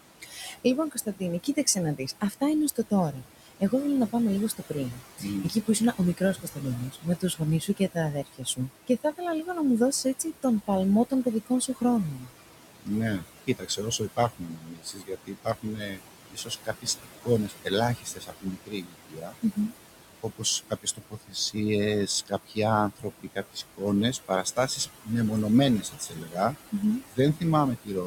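Noise suppressor artifacts run through the whole speech clip. The suppressor pulls bands it judges to be steady noise down by about 17 dB, frame by frame, so the room noise (about 13 dB under the speech) sinks in pauses and swells under the talker. On a spectrogram the background floor looks patchy and flickering rather than even.

Speech cut by the noise suppressor occurs from 0.2 to 9.48 s (ending just before "να μου δώσει"), from 10.04 to 25.09 s, and from 25.82 to 27.91 s. Here the suppressor mistakes soft speech for noise and drops it by up to about 17, 19 and 18 dB. Roughly 2 s, 5 s and under a second of consonants and word endings sound swallowed. The waveform shows clipped-short syllable tails, and the spectrogram shows gaps in high-frequency consonant energy.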